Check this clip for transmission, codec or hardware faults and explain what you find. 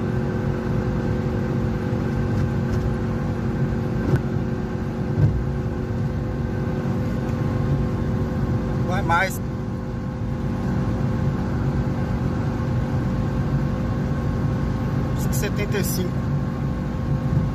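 There is one kind of fault, damaged data in a compressed stream. It occurs five times, at 1.53, 4.16, 6.18, 9.36 and 15.23 s. Each event is very brief, under 20 ms. At those points the compressed data was corrupted. The decoder could not read the affected frames correctly. It lost its place and had to find the next valid frame. Each event sounds like a short chirp or blip that cuts through the audio.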